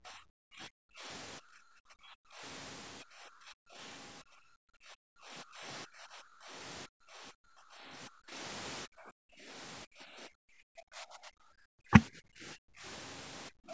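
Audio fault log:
0.0–2.43 s, 3.03–3.8 s, 4.22–6.54 s, 6.86–8.36 s, 8.85–9.5 s, 9.84–12.85 s, 13.49–13.73 s: speech suppressed in double talk. The talker repeatedly sinks by about 30 to 35 dB, likely because an echo canceller mistook the talker's speech, overlapping far-end speech, for echo.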